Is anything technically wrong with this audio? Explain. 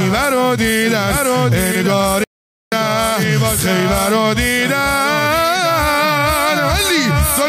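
Yes. There is an audio dropout to silence from 2.24 to 2.72 s, roughly half a second. The input signal was lost for that span, likely through a momentary disconnection or a failed link, while recording carried on writing silence. The sound cuts off abruptly mid-flow and resumes just as suddenly. The gap is dead silence with no room tone underneath, and whatever was happening during those 0.48 s is simply missing.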